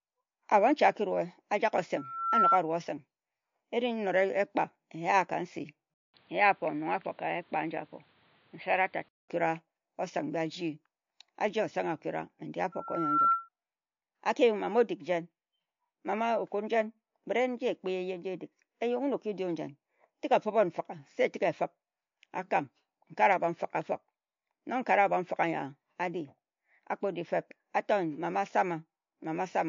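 Throughout, nothing reaches above 7.2 kHz and the speech sounds watery, most likely MP3 compression at a low bitrate; a spectrogram shows a hard ceiling with flickering gaps. From 1.97 to 2.59 s and again from 12.72 to 13.49 s, a loudspeaker feedback squeal at 1.4 kHz swells over about 0.4 and 0.5 s respectively until it is louder than the speech, drawn as one bright horizontal line. From 5.94 to 9.29 s the input has likely been switched to a poorer device: after a 200 ms gap the sound turns dull and boxy at much the same level, with a faint new background noise well below the speech, and the spectrogram ceiling drops to 4.7 kHz.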